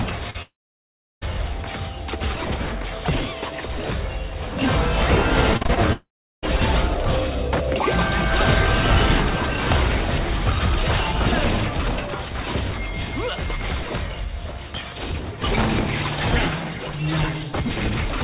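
At 0.30 to 0.36 s a brief smear cuts into the sound, a short blur before real audio resumes. This is short concealed packet loss: about 40 ms never reached the decoder in time, and the receiver filled the hole by extending the preceding sound before blending back.

Almost immediately, from 0.42 to 1.23 s, the sound trails off into a fading continuation and then about 0.71 s of near-silence before returning with material missing. The likely cause is a long network dropout: roughly 0.8 s of audio never arrived, the concealment stretched the last sound briefly, and once it gave up, only quiet remained.

Between 5.53 and 5.79 s the sound turns choppy, with small pieces chopped out in quick succession. This is repeated packet loss producing a robotic sound: five separate gaps, the longest 40 ms, each patched by continuing the prior sound, so that about 44% of that stretch is synthetic fill rather than real signal.

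Right after, from 5.93 to 6.58 s, comes what is likely a second long network dropout. The sound fades into about 0.38 s of silence and then picks up further on, with half a second of material gone. The whole clip carries the narrow, telephone-like band of the call path, with nothing above 4 kHz, which fits a G.711 mu-law codec at 64 kbps.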